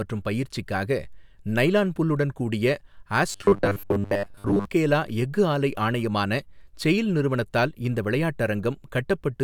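From 3.32 to 4.65 s, just before "எஃகு ஆலை ஆணையமான செயில்", the speech turns into robotic sound from repeated short buffers, likely because audio arrived too slowly and a roughly 10 ms block was looped for most of that stretch, imposing a rigid, metallic 100 Hz buzz.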